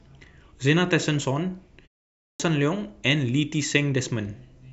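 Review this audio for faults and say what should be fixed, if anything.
The speech clips its start after a pause at 2.24 s, where the sound resumes abruptly and the first 157 ms, up to 2.40 s, is gone. After a 0.45 s silence, the output device went idle and had not fully woken before playback resumed, so the opening sounds were cut. Muted pauses would only drop the background inside the gap, with no speech lost. Keeping the output stream active through short silences prevents this.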